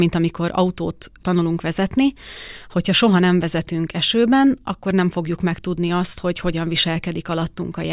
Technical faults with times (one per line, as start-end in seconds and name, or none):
none